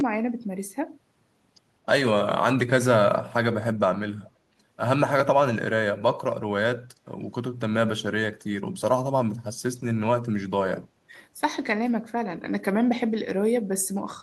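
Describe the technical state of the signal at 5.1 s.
At 5.1 s the signal is intact, with no dropout, clipping, distortion or other fault to be heard.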